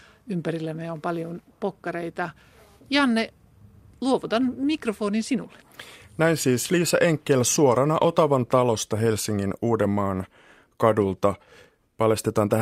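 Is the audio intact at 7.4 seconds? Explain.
Yes, the speech runs intact through 7.4 seconds, with no dropout, click, distortion or other fault at that moment.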